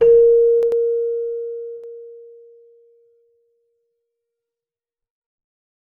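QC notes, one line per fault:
0.61–0.72 s: corrupt FLAC frame. An error peaking at about −17 dBFS. Its length fits two damaged frames. Flipped bits fed the predictor wrong values from the damaged bit on, and the audio returns clean at the next intact frame.
1.77–1.84 s: corrupt FLAC frame. A fainter error of the same kind, at about −37 dBFS, which fits one damaged frame. The predictor's error stops at the frame boundary.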